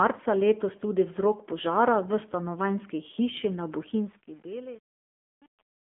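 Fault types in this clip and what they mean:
AMR narrowband mobile codec: The speech sounds buzzy and synthetic, cut off above about 3.6 kHz and squeezed into a thin telephone band of roughly 200 Hz to 3.5 kHz. The voice is rebuilt from a sparse vocal-tract model, and the damage fits a low rate near 7.4 kbps.
Truncation distortion on a fade: From 3.83 s the fade-out toward 5.97 s turns gritty, and from 4.09 s onward it is at its worst. The volume stage keeps too few bits, consistent with 8-bit, and has no dither, so the quiet tail collapses into coarse steps.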